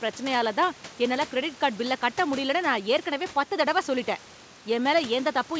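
Nothing stood out on listening to this speech clip, which carries room noise about 20 dB below the speech and, from the G.722 call path, no content above 8 kHz.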